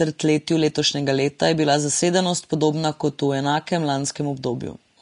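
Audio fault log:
Throughout, Vorbis compression: the speech has nothing above 10.6 kHz, and the treble below that edge is plainly grainy and hissy, with roughened tones and softened consonant onsets. This is likely low-quality Vorbis coding: the encoder dropped the band above the cut-off and quantised the remaining high-frequency residue so coarsely that fine detail turned into noise of similar energy. The damage level fits a low rate in the region of 36 kbps.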